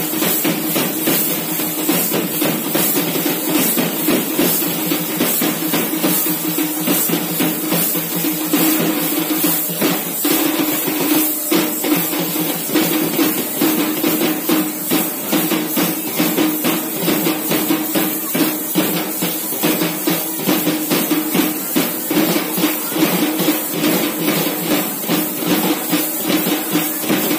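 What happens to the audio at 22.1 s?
Nothing goes wrong at 22.1 s; the audio plays through that moment intact, with no dropout, click or distortion.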